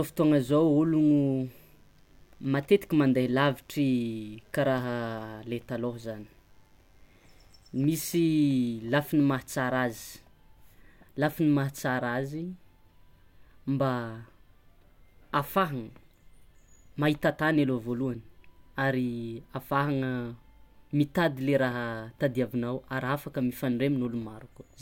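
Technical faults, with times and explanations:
0.00–10.09 s, mains buzz: a steady, raspy 50 Hz buzz sits faintly under the speech, roughly 40 dB below it, then stops at 10.09 s. Sharp switching spikes from a dimmer, rectifier or unshielded cable enter the signal twice per mains cycle, so their energy spreads into a dense comb of 50 Hz harmonics reaching several kHz. On a spectrogram this shows as evenly spaced horizontal lines ending abruptly at 10.09 s; the waveform carries small, regularly repeating spikes.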